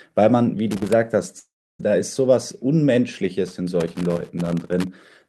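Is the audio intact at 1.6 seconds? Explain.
No, from 1.39 to 1.81 s the speech smears into a fading buzz, then silence; a long network dropout likely lost about 400 ms of audio.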